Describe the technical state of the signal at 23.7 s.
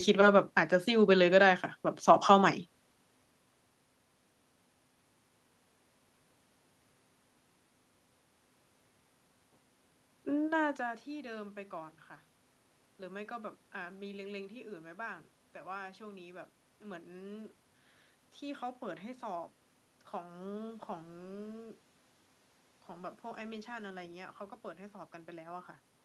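At 23.7 s the signal is intact, with only the room's own background noise present as part of the recording.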